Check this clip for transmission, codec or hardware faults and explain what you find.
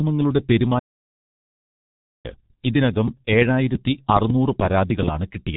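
Three faults are audible in this speech recording: heavy G.723.1 codec damage throughout, a playback stall, and a later train of clicks.

The G.723.1 codec colours the whole clip. Its coarse 30 ms frames and slow-updating voice model, at a rate that fits the 6.3 kbit/s mode, leave speech muffled and hoarse with smeared consonants. A spectrogram shows energy cut off sharply above 4 kHz.

A playback stall runs from 0.79 to 2.26 s, silencing the sound mid-flow for about 1.45 s before it resumes. The likely cause is the player running short of data or its thread being blocked. The waveform shows a flat line, and the spectrogram an empty gap.

A train of clicks runs from 3.08 to 5.09 s, with roughly ten similar pops at an irregular pace averaging about 5.5 per second, peaking around 10 dB above the speech. They likely come from electrical interference or a faulty connection. They appear as thin vertical spikes and full-height stripes.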